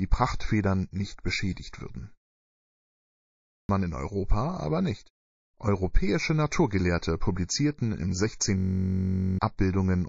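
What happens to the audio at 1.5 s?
A short burst of pre-echo arrives just before a sharp attack, from 1.54 to 1.57 s. A hiss rises about 14 dB out of the quiet gap and leads the attack by 30 ms. The attack itself sounds softened. The codec spread its quantisation noise across a transform block of roughly 72 ms. Noise sized for the loud onset leaked backwards into the silence before it. The encoder never switched to short blocks here, so nothing contained the smear.

The whole clip also carries plainly audible damage, likely from MP3 compression. The sound points to a very low bitrate, around 32 kbps. With so few bits, the encoder drops weak frequency lines and lets them flicker from frame to frame. This gives the audio a watery, swirly texture. It also smears attacks.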